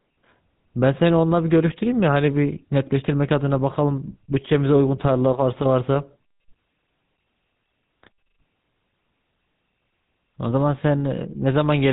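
From start to finish the speech carries the damage of the GSM full-rate codec, plainly audible as a buzzy, gravelly roughness, with nothing reaching above 4 kHz. The coder rebuilds the voice from a vocal-tract model fed by sparse, evenly spaced pulses, which fits the 13 kbps full-rate GSM scheme. Plain band-limiting would sound muffled but smooth; here the grainy buzz is what gives away this codec.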